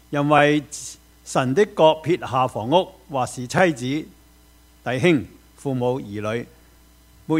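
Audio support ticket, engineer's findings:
Repeated buffer at 0.38 s and 3.58 s: 21 ms block replayed once, brief click-stutter; playback underrun, fits a 1024-sample buffer. Waveform shows duplicated segment with a hard discontinuity at each join.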